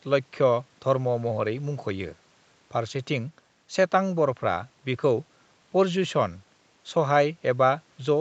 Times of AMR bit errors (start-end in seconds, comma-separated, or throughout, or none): none